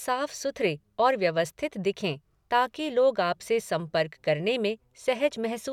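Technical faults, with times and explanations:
No technical faults are audible.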